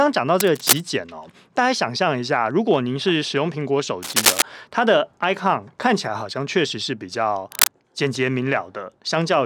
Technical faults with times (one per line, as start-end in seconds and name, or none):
0.39-0.80 cable scratch noise
4.03-4.42 cable scratch noise
7.52-7.68 cable scratch noise